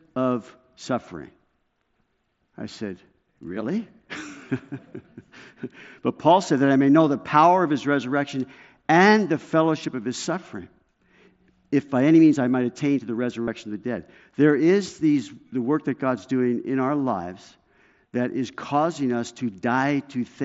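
At 13.42 to 13.48 s, between "might attain to the" and "of the dead", a short buzzy held tone replaces the speech and warbles as it ends. This is concealed Bluetooth headset packet loss: about 52 ms of mSBC packets vanished, and the receiver looped recent waveform to bridge the gap.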